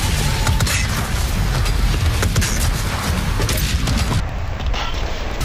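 From 4.2 s to the end, interleaved audio read as planar drops the sound an octave, doubled and choppy at 10.8 Hz blocks of about 93 ms, unlike simple slowed playback.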